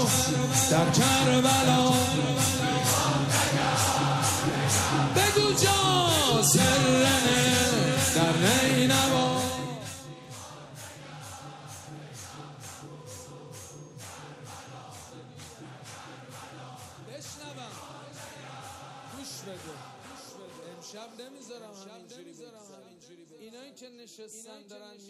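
From 9.10 to 10.15 s there is zipper noise. The level drops by roughly 20 dB over that second, but not smoothly. It falls in coarse steps, around 40 of them each second. No smoothing joins one step to the next. Each jump leaves a tiny click in the waveform. Heard together, the clicks form a fast ticking, a zipping texture riding on the sound as it fades.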